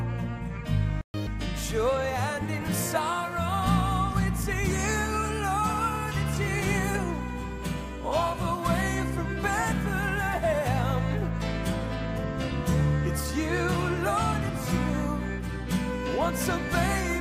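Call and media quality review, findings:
Playback stall, 1.01 to 1.14 s: output drops to dead silence mid-flow for about 128 ms, then resumes. Likely the player's buffer running dry or its audio thread getting blocked, so nothing reaches the output until it recovers.

Catch-up at higher speed, 1.14 to 1.27 s: straight after the gap the audio rushes at 2x, pitched up roughly 10 semitones, then snaps back. Player resampling its backlog to claw back the lost time.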